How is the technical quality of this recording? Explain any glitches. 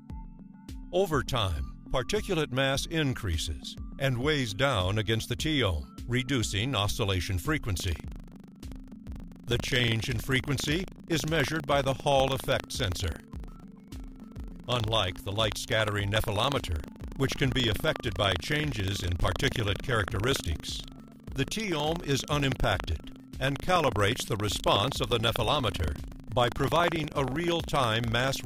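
The recording has one clear technical fault. Buffer tearing starts at 7.76 s and continues to the end: playback and the write position have slipped, so each 40 ms period splices in a small slice of audio from about 70 ms earlier. Hard joins produce a robotic 25 Hz buzz over the sound.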